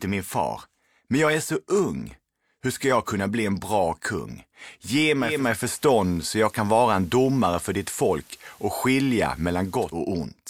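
A speech recording where a hybrid radio drops its digital stream at 5.19 s and blends across to the station's FM analogue feed over about a third of a second, then returns to digital at 10.03 s. During the analogue stretch you get a bed of hiss roughly 30 dB under the signal, and the level shifts by about 2 dB.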